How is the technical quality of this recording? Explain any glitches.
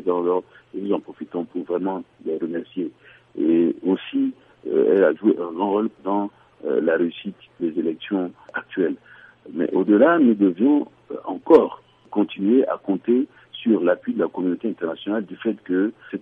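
No glitches can be heard anywhere in the recording. Nothing in the sound needs a technical explanation.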